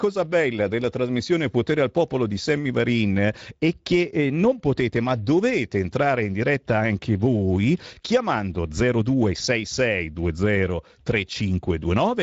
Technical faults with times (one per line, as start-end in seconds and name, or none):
0.00-12.23 Speex codec